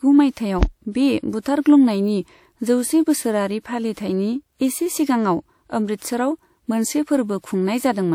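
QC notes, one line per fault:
0.32–0.37 s, pre-echo: a 53 ms wash of hiss leads into the attack before "बे बुथारग्लुंनायनि", block-spread codec quantisation noise smearing the onset.
0.63–0.68 s, phantom power thump: a deep low-frequency thump decaying over about 12 ms, a supply step on the live input passed through the coupling capacitors.
3.93–3.97 s, pre-echo: 40 ms of hiss precedes a sharp attack, codec noise sized for the loud part spilling into the quiet moment before it.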